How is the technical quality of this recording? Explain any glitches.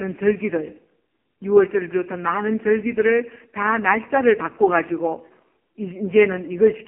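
The quality is poor throughout: the speech sounds buzzy, thin and synthetic, like a weak mobile call, because of an AMR narrowband mobile codec. The voice is confined to a telephone band of roughly 200 Hz to 3.4 kHz, with nothing above 3.7 kHz. The codec rebuilds speech from a vocal-tract model excited by a few pulses every 5 ms. The heavy damage heard here fits its lowest 4.75 kbps mode, where too few bits leave that coarse, robotic texture.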